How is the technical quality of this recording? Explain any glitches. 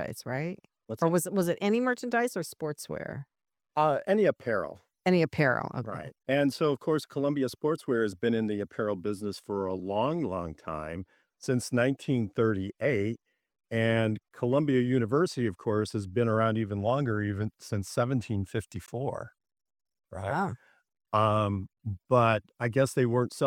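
One glitch stands out: a brief blip from 18.86 to 18.89 s, lasting about 30 ms, where the sound is disrupted before carrying on. This is damaged data in a compressed stream. Part of the encoded data at that point was corrupted or lost, so the decoder could not read those frames properly. It lost its place in the stream and misread or dropped audio until it locked onto the next valid frame header.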